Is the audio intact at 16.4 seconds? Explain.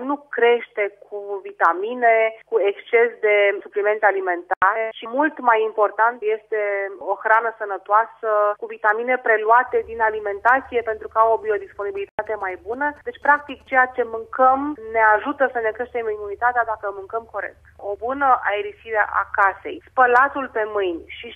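Yes, the audio at 16.4 seconds is intact, with nothing there that breaks, drops or disturbs the sound.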